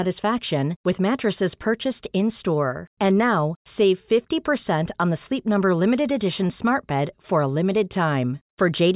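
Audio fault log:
No faults detected; the speech signal is continuous and intact throughout.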